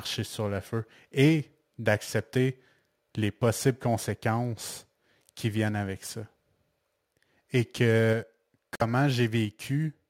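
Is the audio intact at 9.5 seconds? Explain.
No. At 9.45 s the microphone volume stepped down: speech and background drop abruptly by about 2 dB, likely because the call software lowered the input gain.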